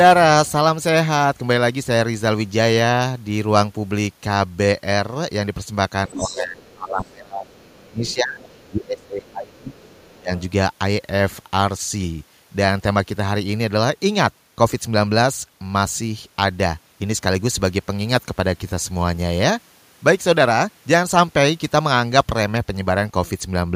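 From 6.08 to 10.31 s the speech dips and thins in pieces, falling by as much as roughly 25 dB, which points to speech suppressed in double talk. The echo canceller likely could not separate the local talker from loudspeaker echo while both sides spoke, and attenuated everything.

In the same stretch, the other side's voice leaks through at 6.13–6.27 s, 6.66–6.73 s, 7.54–7.58 s, 8.06–9.56 s and 9.92–10.42 s. It is faint, mostly well below the speech, but only about 10 dB down in the first burst. Likely cause: residual echo the canceller did not remove.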